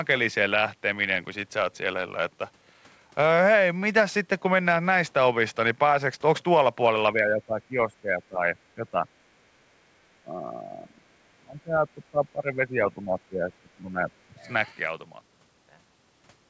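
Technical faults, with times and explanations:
7.13–8.46 s, 8.75–9.05 s, 9.5–9.58 s, 10.25–14.1 s and 14.28–14.45 s, speech suppressed in double talk: the speech repeatedly sinks, by about 10 dB at its mildest and about 30 dB at its deepest. The longest dip spans nearly four seconds. This is likely an echo canceller turning the near talker down while the far side speaks. The waveform shows pinched, uneven envelopes, and the spectrogram shows speech bands fading and breaking into patches.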